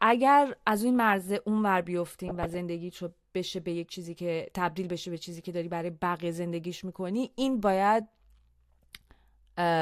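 From 2.28 to 2.59 s the speech turns to DAB burbling: bit errors slipped past error correction, corrupting MP2 samples and scale factors. A spectrogram shows single sub-band blocks flaring for up to a frame, which fits over a dozen damaged frames.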